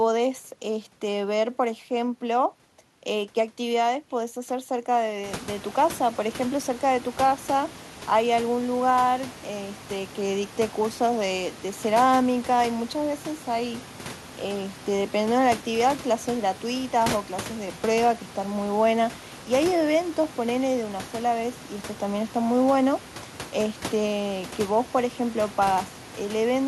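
No technical faults can be heard anywhere in the recording. Room noise in the background rises by about 20 dB at around the 5 second mark and then stays roughly 19 dB below the speech.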